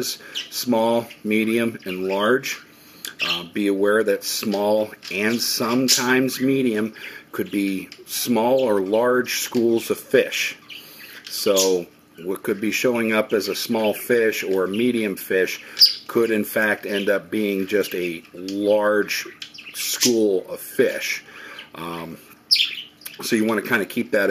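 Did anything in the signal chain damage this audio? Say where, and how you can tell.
Yes. Periodic clock jitter at the converter runs through the whole clip: a rough, metallic edge rides on the sound and vanishes in the silences. Interference near 100 Hz shakes the sampling clock, so a spectrogram shows paired sidebands about 100 Hz either side of each component, strongest on high-frequency content.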